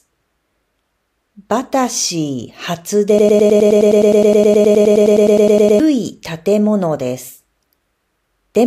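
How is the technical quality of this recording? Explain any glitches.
The recording is marred by one serious glitch, a broken-record loop from 3.19 s to 5.80 s. Within that span the speech stops advancing and a fragment about 104 ms long repeats exactly, back to back, 25 times, producing a rapid mechanical stutter at close to ten repeats per second. The likely cause is a stalled player or stream that kept replaying its last held buffer, so the speech that belonged in those 2.6 seconds is lost rather than delayed.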